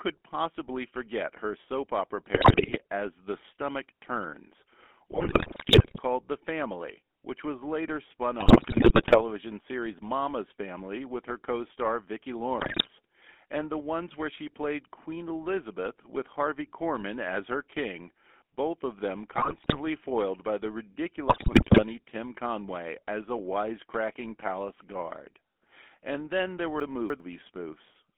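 The whole clip runs through the GSM full-rate codec, with that gravelly, buzzy texture you'd expect from the 13 kbps full-rate coder. Sparse pulse excitation roughens the voice, and the line band of 250 Hz to 3.4 kHz leaves it thin and muffled at the top.

On top of that come six bursts of GSM bit errors. The first, right after "forget her soap opera", runs 2.34 to 2.78 s. The others fall at 5.12 to 5.99 s, 8.4 to 9.22 s, 12.58 to 12.89 s, 19.32 to 19.77 s (between "king both of them" and "foiled by the") and 21.28 to 21.83 s. Corrupted filter, pitch and gain values turn each frame into squawks, pops and gargling.

Finally, after "then there", chunks come out of order from 26.8 to 27.2 s. A 100 ms chunk lands three chunks late, so that stretch sounds jumbled, with three hard joins.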